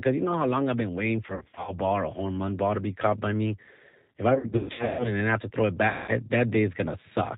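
The whole speech clip runs through the G.729 codec, here the G.729A variant at 8 kbit/s. Speech is rebuilt from a vocal tract filter, pitch predictor and sparse pulses, with nothing above 4 kHz, so it sounds plainly rough, band-limited and synthetic.

From 1.27 to 1.76 s, VoIP packet loss concealed by the speech codec replaces about 220 ms of audio, scattered over 400 ms, with the longest gap 60 ms. The decoder extends its last pitch and filter, producing brief stretched, fading sound. Worse loss follows from 4.35 to 5.11 s: 420 ms missing across 640 ms, including a 140 ms run that fades out and leaves the following frames weak. A further 200 ms is concealed from 5.88 to 6.11 s. The loss pattern throughout fits 20 ms packets.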